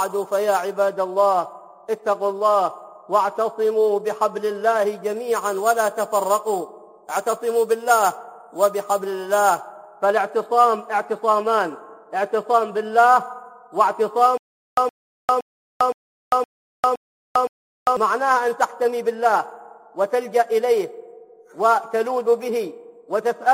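From 14.38 s to 17.97 s the audio falls into a stutter with silent gaps. A short burst of about 117 ms plays, then roughly 399 ms of dead digital silence, and that cycle repeats seven times at a steady 516 ms pace. It's most likely the player or stream stalling and replaying its last fragment on each retry, so whatever should have played across those three and a half seconds is simply gone.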